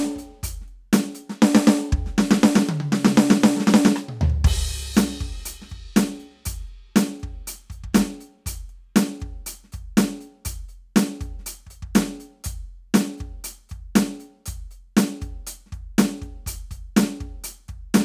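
No faults detected in this music recording.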